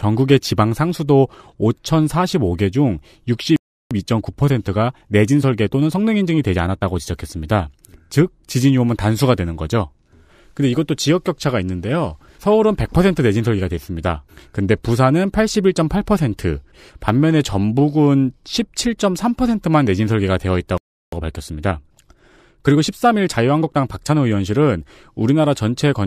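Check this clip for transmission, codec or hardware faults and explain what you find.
The clip shows two transmission-side faults, each occurring twice: playback stalls, each followed by a stretch of time-compressed catch-up.

Playback stall: the speech cuts out mid-flow from 3.56 to 3.91 s and again from 20.78 to 21.13 s, about 0.35 s of silence each time. The likely cause is the player running out of buffered data or its output thread being blocked. Output stops until data resumes, producing an abrupt gap rather than a fade.

Time-compressed catch-up: right after each stall, from 3.91 to 6.91 s and from 21.13 to 24.13 s, the speech runs at about 1.1 times normal speed for 3 s. The player removes the backlog built up during the gap by cutting out small segments and cross-fading across the joins. Pitch stays normal, but the delivery sounds hurried until playback returns to real time.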